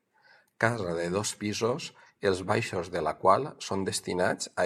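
No technical faults can be heard in this speech clip, so there is nothing to describe in time order.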